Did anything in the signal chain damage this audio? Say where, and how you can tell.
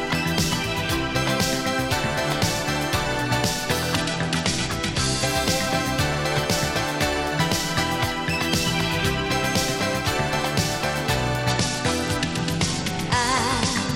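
Yes, at the codec stage of a Bluetooth link: a Bluetooth SBC bit pool drop, twice, from 3.97 to 5.27 s and from 11.5 s to the end. In both stretches the treble goes dull and a gritty, grainy noise rides on the sound. On a spectrogram the upper bands go blank or patchy while lower bands look speckled with quantisation noise. The pattern points to the bit pool falling from 31 to about 13, roughly 94 kbps, as the sender throttled for a congested link.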